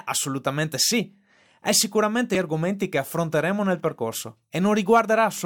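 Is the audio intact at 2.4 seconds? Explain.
No, not quite. Right around that point, from 2.35 to 2.38 s, the speech is hit by damaged data in a compressed stream. Corrupted bytes make the decoder misread the frames there and lose sync while it hunts for the next valid frame header, producing a brief chirp or blip. On a spectrogram it shows as a thin vertical smear of broadband energy breaking the speech harmonics; the waveform shows an abrupt discontinuity.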